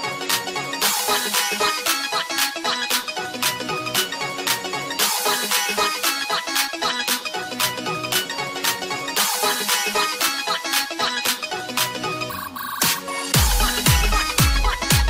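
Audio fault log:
No faults detected anywhere in this recording.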